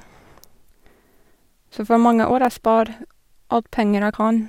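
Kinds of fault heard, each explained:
Compressed frames skipped: At 0.89 s, 2.30 s (just after "for mange") and 4.13 s the speech lurches forward. Whole coded frames of about 26.1 ms never reached the output, so roughly two or three frames, around 50 to 70 ms of speech, vanish each time.
Dropped samples: At 2.45 s a single sharp, dry click cuts through the speech, showing as a thin vertical line across the spectrum. It is likely caused by a fraction of a millisecond of samples going missing, making the waveform jump abruptly.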